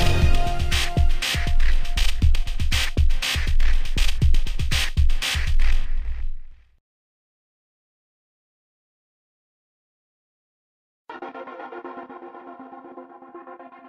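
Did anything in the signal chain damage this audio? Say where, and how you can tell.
No, I can't hear damage from any stage of the chain.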